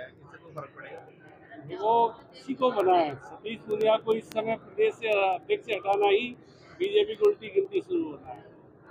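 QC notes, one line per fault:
0.18–8.87 s, word clock ticks. A steady train of ticks sounds about ten times a second, around a hundred in all. Each is a one-sample slip as an unlocked receiving clock drifts past the sender's. The rate suggests a mismatch of roughly 200 ppm.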